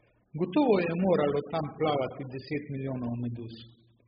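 From the first moment to the end, the speech sounds boxed-in and watery, with the high end dulled. That's most likely AAC compression, AAC-LC squeezed hard enough that it points to a bitrate down around 8 kbps. At that rate the encoder drops its cut-off and leaves gaps across the spectrum, so sibilants turn fizzy and smeared, and sustained vowels get that warbly, underwater wobble. The damage is heavy and constant.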